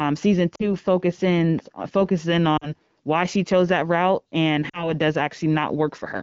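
At 0.55 to 0.69 s, 2.57 to 2.69 s and 4.69 to 4.94 s there are lost AMR speech frames, each about 40 ms, which fits two 20 ms frames. The decoder stretches the last good pitch with falling gain, producing a sound that fades to near silence rather than a hard silent gap.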